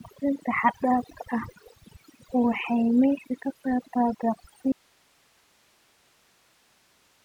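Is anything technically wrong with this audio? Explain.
Yes, two faults are audible.

Overdone noise removal runs through the whole speech clip. The reduction is set too aggressively, so frequency bands near the estimated noise floor are pulled far down along with the quieter parts of the voice. The background drops and breaks up into twinkling specks.

An audio dropout to a faint residue starts abruptly at 4.72 s and lasts to the end. The speech cuts out mid-flow, leaving only hiss roughly 40 dB below the speech level. The likely cause is loss of the wanted signal while the downstream path stayed live.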